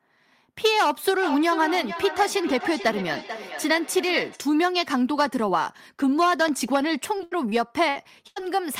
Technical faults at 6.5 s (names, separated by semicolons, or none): loud pop